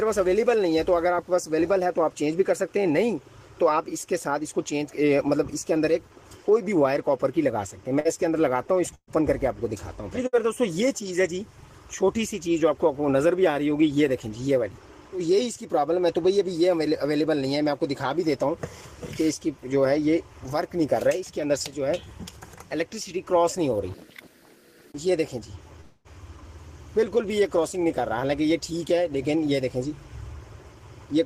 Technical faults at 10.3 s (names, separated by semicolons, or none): burst of packet loss